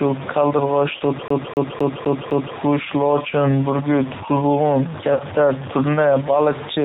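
Low bit depth without dither runs through all the speech: a coarse grain that rises and falls with the sound, loudest relative to quiet syllables and about 15 dB below the speech level. This is likely truncation to around 4 bits with no dither, so the rounding error follows the signal.

The G.729 codec also shapes the whole clip. The speech is cut off above 4 kHz and has a clearly rough, synthetic edge. That comes from the 8 kbit/s coder rebuilding each frame from a vocal-tract filter, a pitch predictor and a few pulses rather than the actual waveform.

VoIP packet loss concealed by the speech codec occurs at 0.97 to 1.03 s. About 30 ms of audio goes missing, which fits a single lost packet. The decoder fills the gap by extending its last pitch and filter, then takes a moment to recover.

A CD stuck on one turn follows from 1.28 to 2.56 s. A 0.26 s fragment plays five times in a quick, even stutter, with a short mute at each jump as the laser is thrown back to the same spot on every rotation.

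VoIP packet loss concealed by the speech codec occurs again at 5.13 to 5.24 s, now with 60 ms missing, consistent with two consecutive packets. The extrapolated sound fades as the decoder lowers its gain frame by frame, and the voice stays weak or distorted briefly after real audio resumes.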